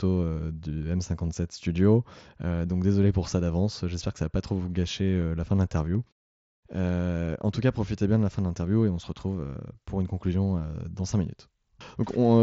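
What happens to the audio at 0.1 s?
Nothing goes wrong at 0.1 s: the speech there comes through intact, carried as usual by the Bluetooth mSBC headset codec, with nothing above about 7.7 kHz.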